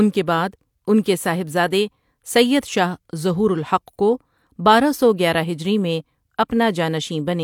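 No technical faults can be heard in the speech.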